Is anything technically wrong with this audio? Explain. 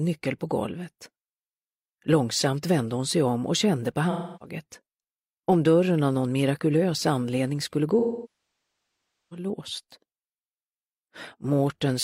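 Yes. AAC frame loss with concealment occurs at 4.10 to 4.55 s and 7.99 to 9.46 s. The decoder rebuilds missing frames from the last good spectrum, so the first gap is a smeared, noisy patch. The second, about 1.3 s long, decays to a very faint noise floor and fades back in.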